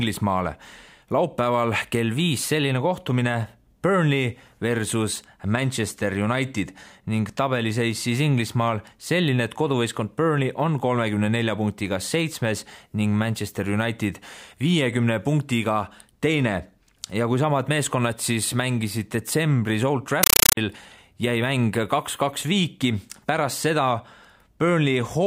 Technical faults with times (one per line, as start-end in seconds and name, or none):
20.23-20.57 compressed stream played as audio